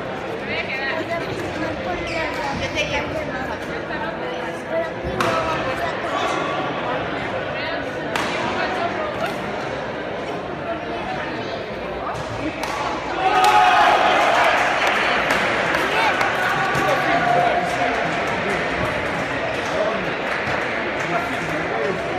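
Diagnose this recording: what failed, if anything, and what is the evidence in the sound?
Hard clipping runs from 13.26 s to 15.36 s, where the signal was driven roughly 8 dB past what a stage could pass, most plausibly the converter or a fixed-point gain stage ahead of it. Every peak in that stretch is sheared flat at the ceiling, and those squared-off tops generate a spray of high harmonics, heard as a harsh, gritty fuzz on each loud moment for about two seconds.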